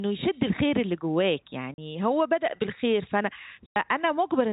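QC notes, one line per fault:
1.74 to 1.78 s and 3.66 to 3.76 s, packet loss filled with silence: two clean dropouts, 40 ms and then 100 ms, where the receiver played dead air in place of the missing audio. Both gaps are whole multiples of 20 ms, which fits 20 ms packets. The speech cuts off abruptly and restarts at each edge. The band-limited telephone sound of the G.711 line is still audible around both holes.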